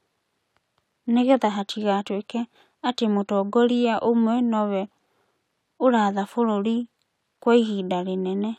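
From 0.12 to 8.24 s, faint ticks recur about every 0.4 s. These clock slip clicks likely come from unmatched clocks about 50 ppm apart.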